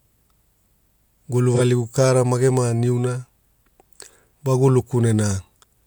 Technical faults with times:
1.54-1.61 AAC frame loss with concealment

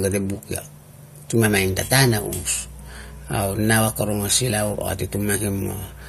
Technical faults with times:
1.45-6.08 mains hum

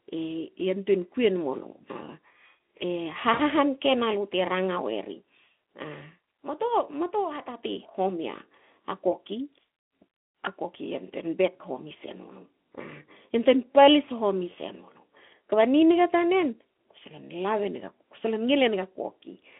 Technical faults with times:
3.33-3.42 VoIP packet loss concealed by the speech codec

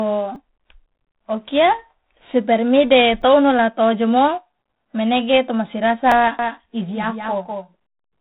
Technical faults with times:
0.00-8.20 4-bit ADPCM compression
0.35 repeated buffer
3.21 repeated buffer
6.12 repeated buffer
6.39-8.20 doubled audio track

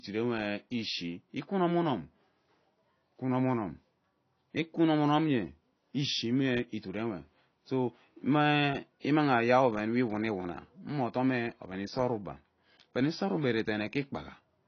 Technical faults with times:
0.00-14.68 AAC compression

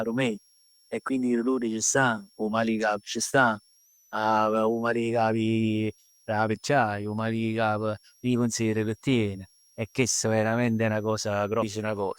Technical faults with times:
0.00-12.19 switching supply whistle
11.61 stream segment skipped

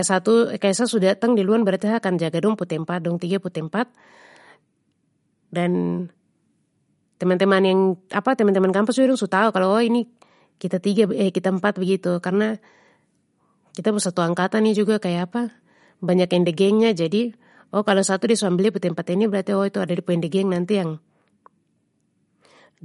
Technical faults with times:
0.00-22.84 MP3 compression

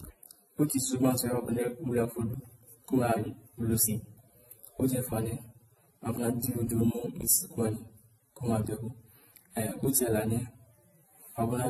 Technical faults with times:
0.00-11.70 transcoding between lossy codecs

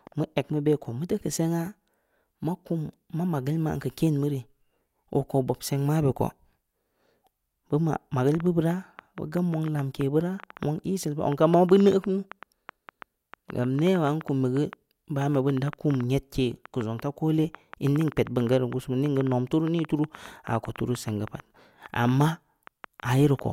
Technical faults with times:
8.35-23.40 train of clicks

